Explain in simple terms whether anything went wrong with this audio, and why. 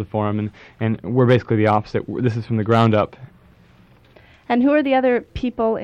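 Hard clipping happens twice, from 1.20 to 1.78 s and from 2.71 to 3.00 s. The sound got too loud for the system, so its peaks were sliced flat. That adds a crackly edge. The second spot is pushed harder and sounds rougher.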